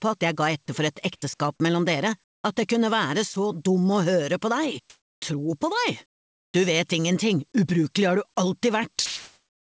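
At 2.24 to 2.44 s the quiet background between louder passages is swapped for comfort noise in place of the background, likely from discontinuous transmission, where the receiver synthesises a rough stand-in for the real noise floor. The patch sits some 50 dB below the loudest sound and steps down by about 21 dB, a sudden hush. The same thing returns at 4.90 to 5.22 s (up by about 15 dB), 6.06 to 6.54 s (down by about 19 dB), and from 9.06 s to the end (up by about 6 dB). On a spectrogram each patch is a flat, textureless block with abrupt vertical edges. In the waveform it is an even band of noise at a different height from its surroundings.

At 3.34 s, a 20 ms slice of the sound is lost as sound dropped by the voice detector, which likely misjudged it as background and stopped sending. It is heard as a tiny gap. It shows as a thin vertical notch of flat noise cut through the signal. Throughout, nothing appears above 8 kHz, which fits a wideband call codec such as G.722 at 64 kbps.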